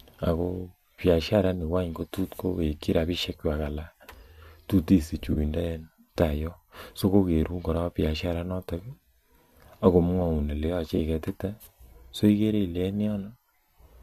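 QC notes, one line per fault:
5.33 to 5.38 s and 10.98 s, AAC frame loss with concealment: the decoder lost part of the stream and filled the gaps from the last good spectrum. The 30 ms gap fits three short frames of the low-delay AAC compression the stream likely uses, and the 10 ms gap fits one. With no real data, each patch comes out as a brief smeared, noisy, phasey blur. The gaps are too short for any fade toward silence.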